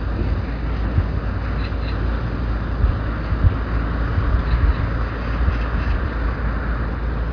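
Nothing faulty can be heard.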